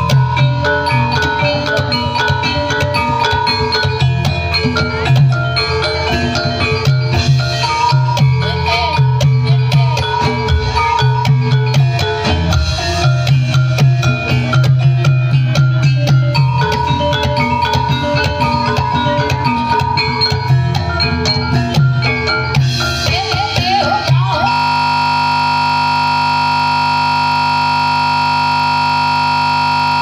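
At 24.52 s a system hang loop begins: the system froze while the hardware replayed one 20 ms buffer, producing a steady 50 Hz buzz through to the end.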